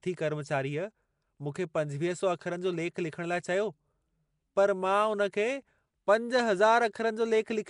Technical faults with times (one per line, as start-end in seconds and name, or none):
0.00-7.70 Nellymoser compression